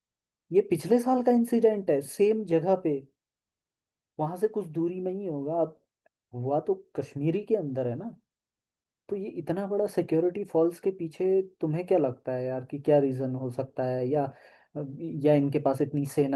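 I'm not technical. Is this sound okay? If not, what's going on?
Yes, nothing in this speech recording points to a fault. It has gone through Opus voice compression, which is working as intended here, and the only trace is a very light softening of the finest detail while the full range of the sound is kept.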